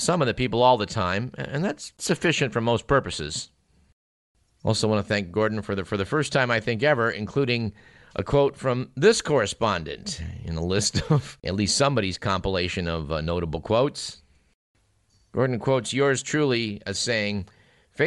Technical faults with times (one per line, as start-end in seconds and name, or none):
0.00-18.07 Bluetooth LC3 compression